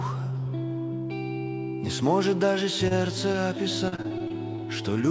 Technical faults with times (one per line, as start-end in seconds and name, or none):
2.88-2.92 short concealed packet loss
3.32-3.36 short concealed packet loss
3.88-4.60 repeated packet loss (robotic sound)